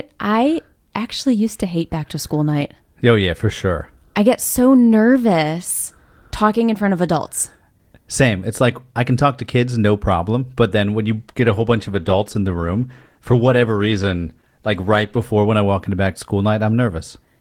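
Speech that turns rough and muffled from 11.09 to 15.31 s, a call bitrate drop where the encoder coded more coarsely, consistent with falling from about 32 to 16 kbps.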